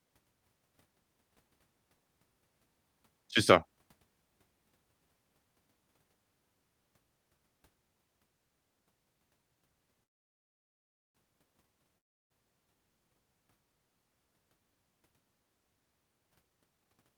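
At 10.03 s the sound stops and stays silent until 11.17 s, a call audio freeze lasting about 1.1 s. The likely cause is packets held up in transit, so the jitter buffer ran dry and the receiver had nothing to play. Nearly all of the gap is silence. When the audio resumes it picks up exactly where it left off, with nothing skipped. That is the mark of a freeze: time is added, not content removed.

From 11.98 s to 12.32 s comes a long network dropout of 0.34 s, almost all of it silent. No audio likely reached the receiver for that stretch, and this time the missing part is never played. When sound returns it has jumped about 0.32 s further on. Against the freeze before it, the difference is what follows the gap. Here the continuation is abrupt and some of the speech is gone, rather than carrying on seamlessly after a pause.

From 16.43 s to 17.16 s a jitter buffer speed-up makes the speech run at about 115% of normal rate, so it sounds hurried right up to the end. 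The receiver was working off a backlog of buffered audio by cutting out many tiny pitch-period slices, roughly a tenth of a second in total. The pitch stays where it was, and that separates it from a simple faster playback, which would raise the voice as well.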